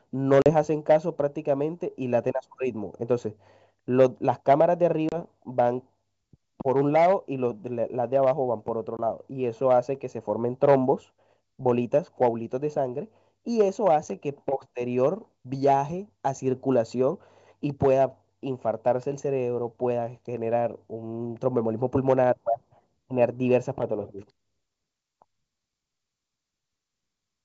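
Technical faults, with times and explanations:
0.42–0.50 s, 5.09–5.15 s, 8.97–9.00 s: packet loss on an ADPCM call. The G.722 speech drops into hard-edged silent gaps of about 40, 30 and 20 ms, each a few packets. The decoder's predictor and step size lose step with the sender's, so speech returns slightly distorted.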